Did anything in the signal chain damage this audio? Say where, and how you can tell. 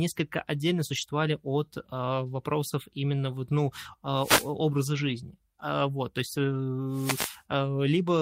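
Yes. At the network stage, lost packets were rebuilt from error correction at 0.93 s, just before "от вопросов именно вот", then at 4.93 s and 6.51 s. Those stretches are roughly 60, 120 and 40 ms long. Low-bitrate redundant copies fill each loss, so nothing drops out, but the sound turns grainy and noisier.

In the analogue radio link, wireless microphone noise hits land at 4.16 to 4.52 s, right after "вопросов именно вот ну", and at 6.90 to 7.42 s, after "то есть". Each is a swish of static. Fading FM reception lets receiver noise swell over the speech. A spectrogram shows broadband hiss smeared across the bursts.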